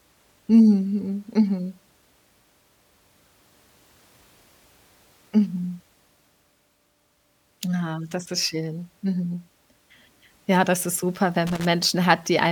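Right at the end, around 11.47 s, just after "das ist super wenn", there's a burst of loose connector crackle lasting roughly 0.18 s, out to about 11.65 s. It's a scratchy, irregular crackle cutting across the speech, the kind you get when a worn or dirty contact shifts and keeps making and breaking. The signal gets chopped in rapid fits.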